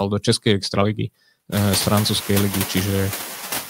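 Throughout the speech, the background noise sinks in the gaps and swells back up beneath the talking, so the noise floor pumps in step with the speech. These are noise suppressor artifacts. The suppressor estimates which frequency bands hold steady noise and turns them down frame by frame, by about 11 dB here. The noise it is cutting is the room noise, which climbs sharply around a second and a half in and then sits well below the speech.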